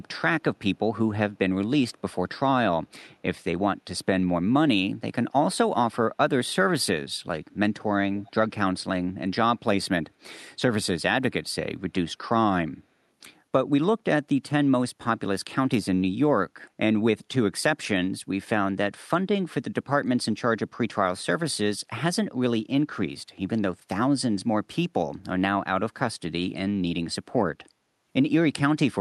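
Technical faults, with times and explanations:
8.19–8.32 s, echo leak: there's a brief, very faint delayed copy of the speech, sitting roughly 30 dB under the main signal and trailing it by about 284 ms. It's most likely the far end on a loudspeaker, with its echo canceller letting a scrap of our own audio slip back through its mic. It's band-limited like the rest of the call audio to about 12 kHz.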